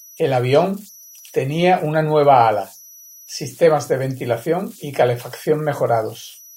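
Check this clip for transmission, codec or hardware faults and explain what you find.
There's one hardware fault, running the whole way through: converter idle tones. A delta-sigma converter with no dither is settling into repeating bit patterns on low-level input, leaving a whistle somewhere around 5 kHz in the pauses and a grainy hiss under the quieter speech, sitting about 28 dB below the signal.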